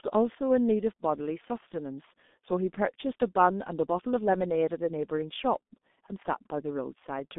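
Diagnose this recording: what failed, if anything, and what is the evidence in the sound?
The failure is at the codec stage: the whole recording has been through G.723.1 coding. The speech sits in a narrow line band of roughly 200 Hz to 3.6 kHz with nothing above 3.7 kHz, so it sounds muffled, and heavy coding damage gives a hoarse, blurred quality to consonants. A plain telephone band-limit would stay clean within that band. Here the slow, coarse 30 ms frame modelling smears the sound itself, which points to a very low bitrate, around 6.3 kbit/s.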